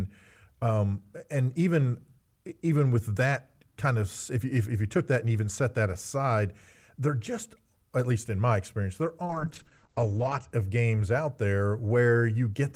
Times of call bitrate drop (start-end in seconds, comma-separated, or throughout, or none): 9.29-10.57